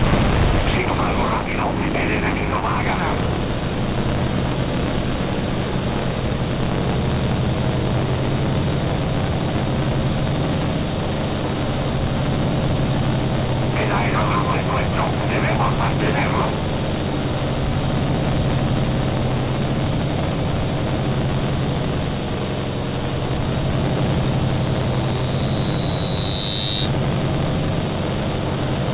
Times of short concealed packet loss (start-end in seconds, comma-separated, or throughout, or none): none